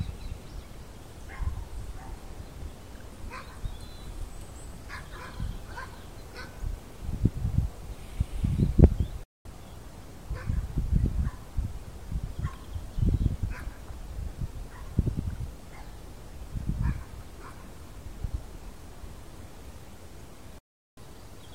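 At 9.23 s and again at 20.58 s, the sound drops to silence within about 3 ms. These are digital broadcast dropouts. The receiver muted on bad frames. The gaps last about 0.26 s and 0.44 s, which fits roughly five and nine lost frames.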